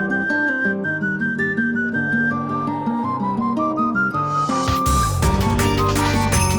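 No technical faults detected.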